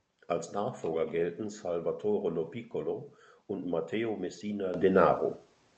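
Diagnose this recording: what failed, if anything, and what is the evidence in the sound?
The fault is a microphone volume stepped up, introduced at the call-processing stage. At 4.74 s the level of the speech and the background noise floor rise together by about 10 dB in a single step, with no fade. That combined jump shows the software's automatic gain control judged the input too quiet and raised the device's input volume at once, instead of the source getting louder. The call path's Opus coding and its cut-off around 8 kHz carry the jump unchanged.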